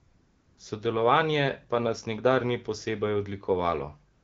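A speech recording with AMR comfort noise at both ends: from 0.0 to 0.57 s and again from 4.13 s to the close, the phone sent no speech frames, so the receiver substituted smooth synthetic noise for the real background. A spectrogram shows flat, featureless haze there, and the waveform a steady low band. The wideband coding between, with clear speech, points to an AMR-WB rate around 12.65 kbit/s.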